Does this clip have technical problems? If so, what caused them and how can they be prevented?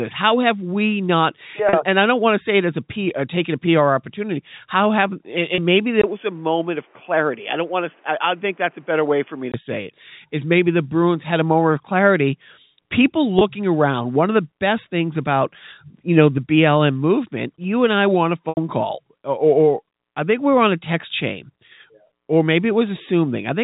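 Yes. Packet loss with pitch repetition occurs at 1.69 s (40 ms lost), 5.55 s (30 ms), 13.39 s (20 ms, between "moment of clarity people" and "around one of the") and 18.49 s (80 ms, after "and i want a"). The receiver bridged each gap by repeating the last pitch cycle. The short ones sound like a briefly held buzz, and the 80 ms gap fades toward silence before the sound returns. The gap lengths fit 10 ms packets. A jitter buffer with forward error correction, or a more stable network path, would prevent this.

From 6.02 s to 9.54 s, where the sound recovers at "say it", the input was likely switched to a poorer device. A 20 ms silence marks the switch. After it the band stops at 3.4 kHz, so the sound goes dull and boxy, narrower than the G.711 telephone coding carrying the call, which itself passes up to 4 kHz. The level drops by roughly 5 dB, and a new background noise appears roughly 35 dB below the signal. 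Fixing the input device in the system settings and disabling automatic headset call profiles would prevent it.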